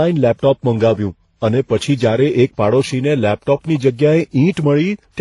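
Throughout the speech, nothing remains above 11.1 kHz, and the artefacts of several codecs sound at once. Hearing them together, rather than one codec's single signature, points to transcoding between lossy codecs, likely HE-AAC, then MP3, then WMA.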